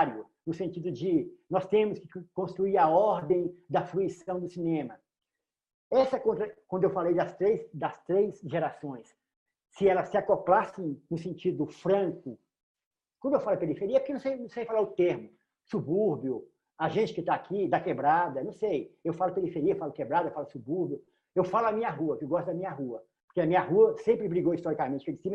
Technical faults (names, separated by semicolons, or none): short concealed packet loss; jitter buffer slow-down